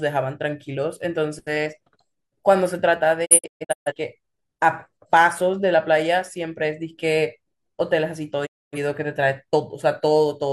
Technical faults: digital broadcast dropout

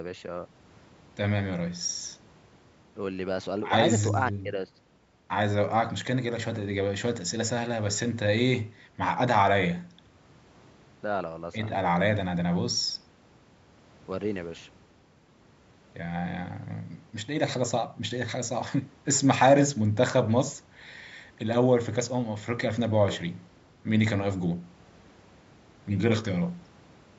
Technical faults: none

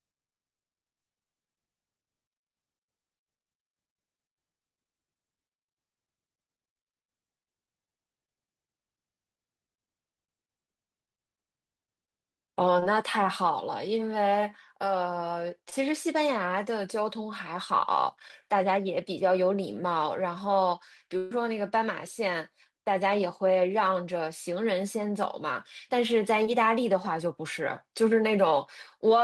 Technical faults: short concealed packet loss; burst of packet loss

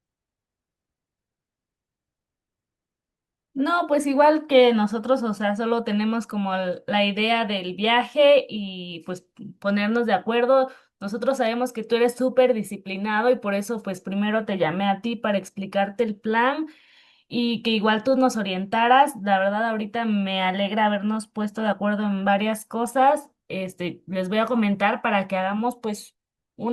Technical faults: none

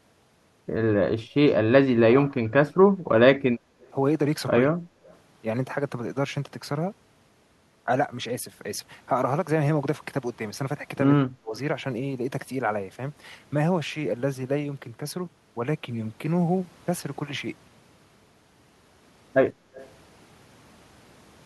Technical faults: speech suppressed in double talk; echo leak; background gated by the echo canceller

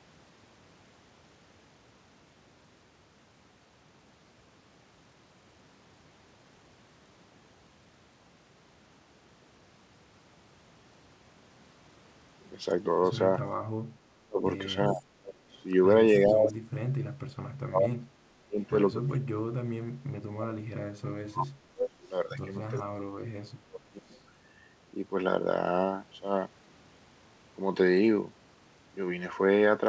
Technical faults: speech suppressed in double talk; echo leak

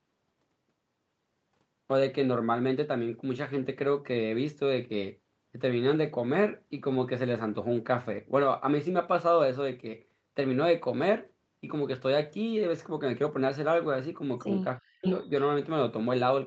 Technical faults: speech suppressed in double talk; echo leak

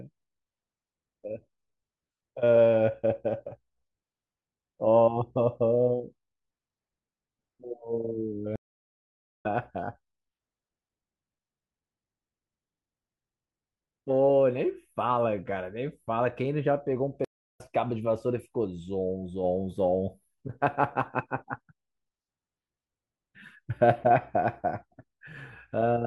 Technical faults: stream reconnect

